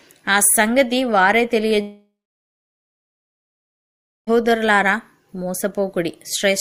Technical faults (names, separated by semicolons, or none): long network dropout